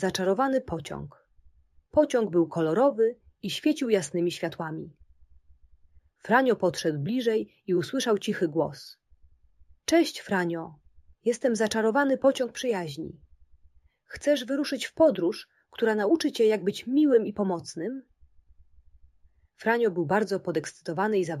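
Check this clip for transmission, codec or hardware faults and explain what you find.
One fault runs through the whole clip: imaging from linear upsampling. The sound appears to have been raised from a 16 kHz rate to 48 kHz by joining samples with straight lines. That interpolation filters poorly. The top of the original band is dulled. A mirror copy of the spectrum folds back above it, spanning 8 kHz to 16 kHz, roughly 30 dB below the signal. It is heard as a faint metallic shimmer on bright, hissy sounds.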